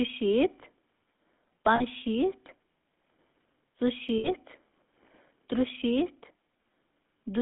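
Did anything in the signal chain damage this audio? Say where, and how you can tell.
Yes. GSM full-rate codec, throughout: the codec stage leaves buzzy, gravelly roughness on the speech inside a 200 Hz to 3.5 kHz band, consistent with 13 kbps pulse-excited vocal-tract modelling.

Lost GSM frames, 1.76 to 1.82 s and 4.18 to 4.29 s: network losses of 40 and 60 ms, where the decoder repeats the last good frame, producing a short metallic ring.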